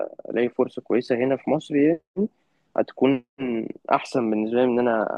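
No faults are present anywhere in the recording.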